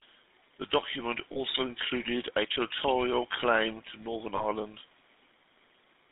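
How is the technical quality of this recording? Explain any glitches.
The recording quality is poor. The speech has gone through a narrowband phone codec, and it also has two brief glitches.

The GSM full-rate codec is plainly audible throughout. The sound is confined to roughly 200 Hz to 3.7 kHz. The codec drives a vocal-tract model with sparse pulses, which makes the speech buzzy and gravelly. That fits a 13 kbps link.

Lost GSM frames occur at 1.32 to 1.37 s and at 4.36 to 4.45 s. Each gap fits about 40 ms of missing data. The decoder repeats the last good frame, so you hear a short, rough, metallic ring.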